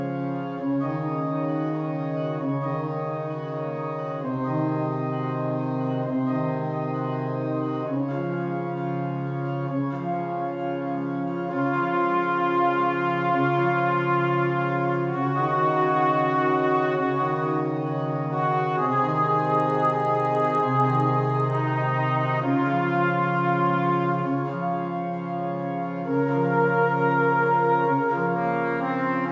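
From 19.4 to 21.6 s, the resampler restarted on every block, converting each 50 ms block in isolation, leaving edge errors heard as regular ticking at 20 Hz while signal plays.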